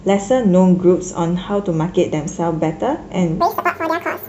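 From 3.41 s to the end, the audio is read two samples at a time, so the speech jumps to double speed and an octave higher.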